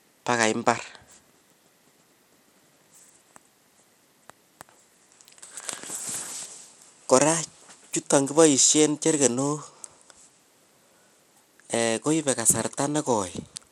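From start to finish the speech carries a plainly audible codec sound, likely Bluetooth SBC compression. The treble is thin and unsteady. High detail flickers in and out instead of holding. A gritty, grainy noise sits on the voice, with aliasing riding on it. SBC splits the sound into a few wide bands and shares out a small bit budget with no hearing model. The weak top bands get starved, and the rest are coarsely quantised. The damage fits a low setting around 96 kbps.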